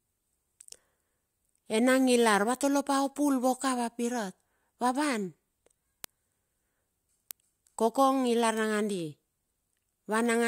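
From 0.14 s to 10.26 s, word clock ticks run beneath the speech at a steady rate of roughly one every 0.4 s. The receiver is not locked to the sender's clock, which is off by roughly 50 ppm. Each slip drops or repeats one sample, producing a sharp click.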